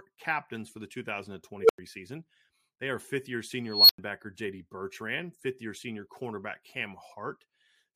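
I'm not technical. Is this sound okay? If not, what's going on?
No. This speech has two unstable filter faults. At 1.6 s a low beep swells within a tenth of a second. At 3.67 s, after "are fifth year", a high squeal grows for 0.2 s. Each then drops to brief silence, unlike microphone feedback howl.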